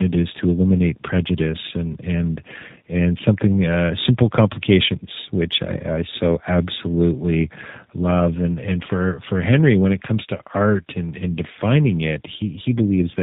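Speech with tandem speech coding throughout: nothing above 3.8 kHz, and a roughness and warble that point to AMR-NB then G.729A stacked, harsher than either codec alone.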